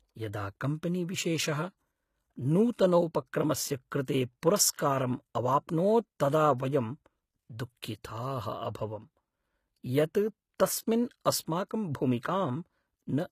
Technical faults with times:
0.00-13.31 HE-AAC compression
4.05 pre-echo
6.58 pre-echo

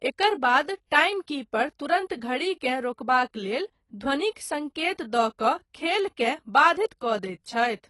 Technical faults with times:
0.00-7.90 AAC compression

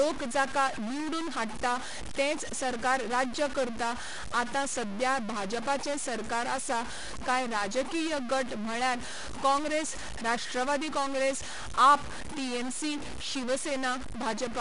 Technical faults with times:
0.00-14.60 stuck bit
0.00-14.60 4-bit ADPCM compression

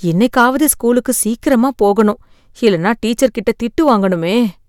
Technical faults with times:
0.23-0.71 hard clipping

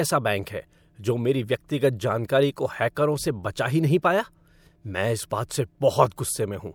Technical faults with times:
2.28 pre-echo
5.30 pre-echo

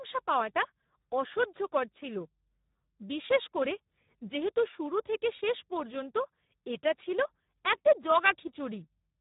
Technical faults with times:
0.00-9.20 Speex codec

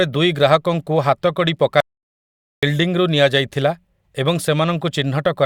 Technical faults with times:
1.80-2.63 audio dropout to silence

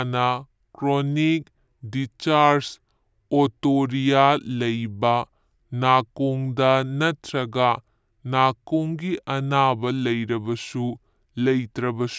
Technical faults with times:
0.00-12.18 wrong sample rate

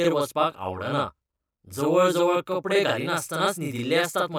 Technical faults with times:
0.00-4.38 channel delay (doubling)

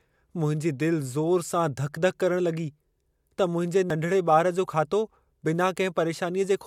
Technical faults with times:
3.90 overlap between stream segments

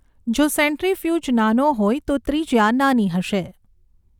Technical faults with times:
none

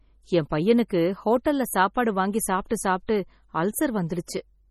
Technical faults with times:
0.00-4.70 MP3 compression

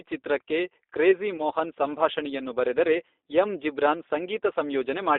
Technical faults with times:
0.00-5.19 G.729 codec
1.37-1.42 VoIP packet loss concealed by the speech codec

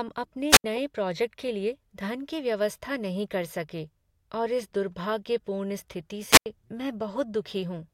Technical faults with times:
0.50-0.64 wireless microphone squelch dropout
6.29-6.46 wireless microphone squelch dropout

